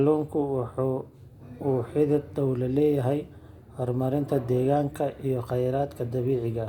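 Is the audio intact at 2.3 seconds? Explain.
Yes, the speech at 2.3 seconds plays through cleanly with no dropout, click, distortion or other fault at that moment.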